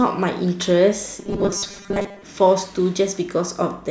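From 1.20 to 2.23 s, robotic sound from repeated short buffers: the speech turns into a rigid 200 Hz metallic buzz, likely from a roughly 5 ms buffer being replayed in place of most of the real audio.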